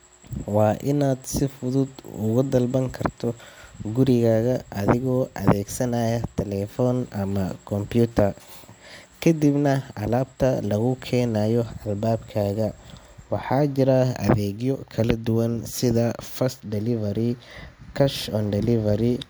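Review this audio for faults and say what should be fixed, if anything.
Nothing in the recording calls for a fix, as no technical fault can be heard anywhere in the speech. No correction or prevention step is needed.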